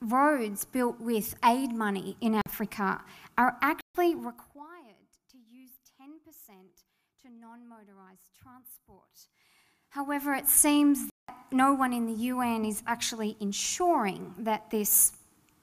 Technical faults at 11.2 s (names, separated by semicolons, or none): block of digital silence